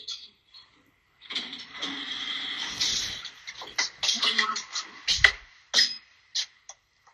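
From start to finish the sound is dull and muffled. The top end comes and goes, as if parts of it keep switching off and on. What remains has a gurgling, grainy edge. This is plainly audible MP2 compression damage, likely from a low bitrate. MPEG Layer II splits the signal into 32 sub-bands and shares out bits between them. Short of bits, it drops upper bands and quantises the rest coarsely. The damage fits a rate near 80 kbps.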